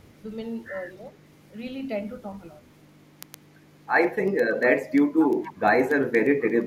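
Word clock ticks run from 0.19 to 6.62 s, sharp clicks about every tenth of a second, as an unlocked receiving clock drifts a couple of hundred parts per million and drops or repeats single samples. Echo leak appears from 5.19 to 5.59 s: a copy of the speech 259 ms late and about 10 dB quieter, likely a far-end loudspeaker echo the canceller missed.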